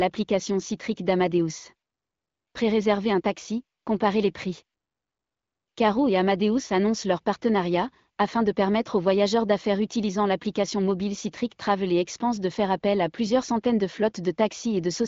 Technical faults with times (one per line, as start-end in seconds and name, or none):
none